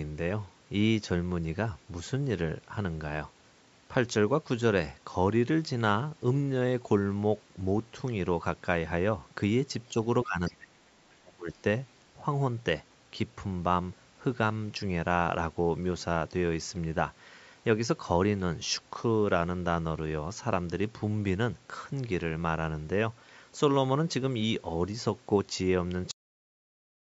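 Between 10.25 and 10.75 s, an echo canceller likely mistook overlapping talk for its own loudspeaker echo and turned everything down. The result is speech suppressed in double talk: the voice sinks by roughly 25 dB and thins out in broken patches for nearly half a second.

Inside that dip, from 10.46 to 10.53 s, the canceller likely left part of the loudspeaker signal in the microphone, so the other side's voice leaks through. It is a brief, faint scrap, far below the main talker.

The same double-talk suppression returns from 11.13 to 11.64 s, now cutting deeper, around 30 dB. Again the voice fades and breaks up in pieces for about half a second.

At 26.11 s the final buffers were never written, giving a cut-off end. The sound stops mid-utterance and falls straight into digital silence with no natural decay.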